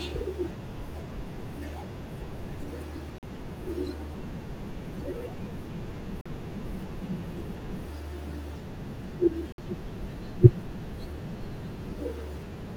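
At 3.18–3.23 s, 6.21–6.26 s and 9.52–9.58 s the speech drops to silence for about 44, 44 and 58 ms, which fits three or four lost packets, likely a Bluetooth dropout. It differs from a stall because the speech resumes further along, as if it played on unheard.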